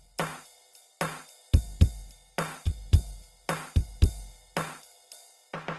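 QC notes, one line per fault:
Throughout, Opus compression: the music sounds grainy and rough, with nothing above 12.2 kHz. This likely comes from Opus music mode at a rate near 16 kbps filling starved bands with noise.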